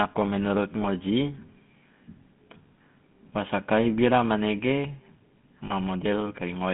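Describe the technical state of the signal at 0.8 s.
The GSM full-rate codec is active here, band-limited to 150 Hz–3.5 kHz, with buzzy, gravelly pulse-excited roughness. That grain, not just dullness, separates it from plain telephone filtering. Just after, from 0.82 to 0.87 s, lost GSM frames leave a brief metallic ring, fitting one 20 ms frame concealed by repeating the last good one. The sound is held rather than dropped to silence.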